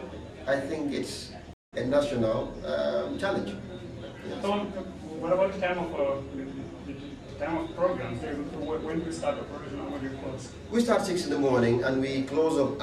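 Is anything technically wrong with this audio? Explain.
Yes. At 1.53 s the audio cuts to silence for about 190 ms and comes back at 1.74 s. This is a stream reconnect: the connection broke, the player went quiet, then reconnected and started a fresh decoder partway through the stream, so the sound fades back in. Unlike a simple dropout, which resumes where it stopped, the material picks up roughly a fifth of a second further on, so a short stretch is missing.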